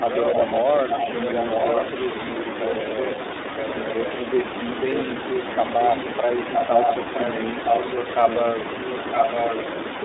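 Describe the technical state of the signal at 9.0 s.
At 9.0 s an echo leak is under way, running from 4.93 to 9.55 s. A copy of the speech returns about 964 ms late, roughly as loud as the original. This is likely a far-end loudspeaker whose echo canceller let it through. Throughout, iLBC codec damage is plainly audible. The band runs from 250 Hz to 3.7 kHz. Frames are coded independently, which fits the 30 ms, 13.33 kbps mode, and this gives a rough, synthetic edge.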